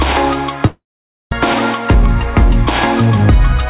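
From 0.66 s the last sound hangs on as a fading buzz, then about half a second of silence follows before audio resumes at 1.33 s with a piece missing. This is likely a long network dropout: packets stopped arriving, the receiver concealed the gap, and the lost stretch was skipped.

Between 1.94 s and 3.61 s the sound runs about 2% fast at unchanged pitch. This is a jitter buffer speed-up: with surplus audio queued, the receiver trimmed pitch-period-sized slices, roughly 40 ms in total, to bring latency back down.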